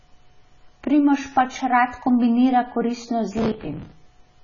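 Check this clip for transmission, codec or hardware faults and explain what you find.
Two faults are present in this speech clip: a continuous codec degradation and a short burst of processor overload crackle near the end.

AAC compression, throughout: the audio is heavily damaged and nothing survives above 7 kHz, which points to AAC-LC at around 16 kbps as the likely cause. Coarse quantisation leaves a dull, smeared sound with warbling on sustained sounds and sibilants. That watery texture separates it from a simple low-pass filter.

Processor overload crackle, 3.38 to 3.92 s: the processor missed a few dozen buffer deadlines in a row, and each miss replayed a stale fragment with hard edges. The result is gritty tearing over the sound, which fits buffers of around 10 ms. Because old audio repeats instead of dropping to silence, it sounds like grinding rather than clean dropouts.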